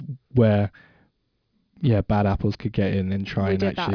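Aliasing runs through the whole speech clip: content above about 5.5 kHz folds back to unrelated lower frequencies, which points to a drop to roughly 11 kHz without filtering. It sits around 30 dB down, roughening sibilants, unlike clean band-limiting, which only dulls them.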